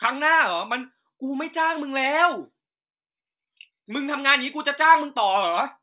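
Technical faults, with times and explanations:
No technical faults can be heard in this speech recording at any point.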